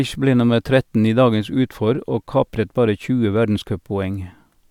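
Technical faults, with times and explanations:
No technical faults can be heard anywhere in the recording.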